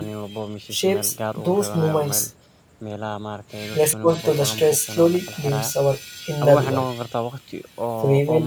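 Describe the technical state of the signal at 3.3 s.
The signal at 3.3 s is intact, with no audible fault at that point in the speech.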